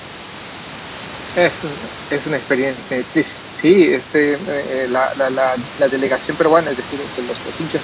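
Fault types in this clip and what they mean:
No faults can be heard anywhere in the audio.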